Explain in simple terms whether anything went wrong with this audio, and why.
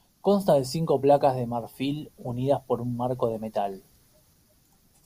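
Nothing went wrong that a listener can pick out in this speech recording. No moment in it stands out as a problem.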